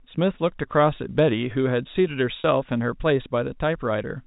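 Packet loss with pitch repetition occurs at 2.40 s, lasting to 2.44 s. About 40 ms of audio went missing, which fits two lost packets, and the receiver filled the gap by looping the last pitch period of the speech rather than leaving silence. Because the gap is short, it comes across as a brief held, slightly buzzy tone before normal speech resumes. The surrounding speech carries the narrow telephone band of G.711 coding.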